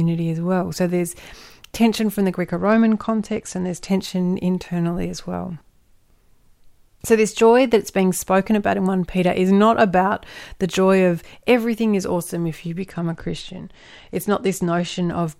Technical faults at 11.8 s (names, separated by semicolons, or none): none